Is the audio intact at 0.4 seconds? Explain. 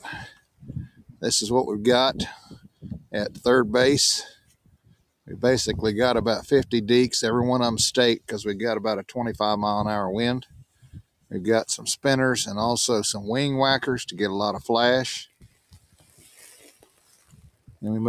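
No. At 0.4 s the audio falls inside a stretch of sound cut by the noise suppressor, running from 0.28 to 1.23 s. A suppressor designed for speech misjudged this sound as background noise and pulled it down by about 21 dB at its deepest, so it sinks and thins while any sharp onsets poke through. On a waveform the envelope collapses to a narrow band across that span; a spectrogram shows the sustained energy fading to pale, patchy traces.

This dip is part of a broader problem: a noise suppressor applied to music or sounds is active across the whole clip. It treats held tones, ambience and decays as noise, so the gain swings by roughly 20 dB as it clamps and releases, producing pumping and fluttering with tails cut short. Visually, the waveform's level rises and falls unevenly, and spectrogram regions behind attacks look hollowed out and blotchy.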